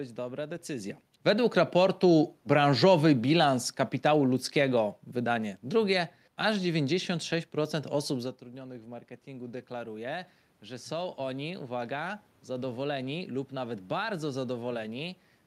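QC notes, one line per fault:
2.81–7.02 s, automatic gain falling: the gain control eases the level down by about 4 dB over about four seconds. The room noise sinks along with the speech, unlike the talker's moves near 0.5 s and 8 s, which change only the voice.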